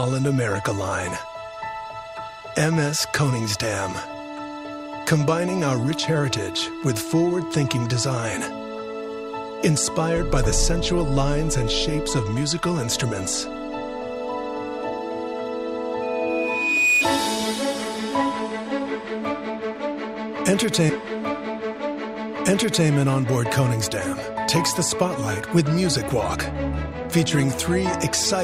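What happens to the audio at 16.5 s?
At 16.5 s the audio is caught in loudspeaker feedback squeal, running from 16.02 s to 17.09 s. A single tone near 2.5 kHz swells over roughly a second until it sits about 5 dB above the rest of the sound, because the microphone is picking up its own loudspeaker and the loop gain at that frequency tops one. The steady pitch and the self-sustaining build are what set it apart from a brief electrical whine or tonal interference.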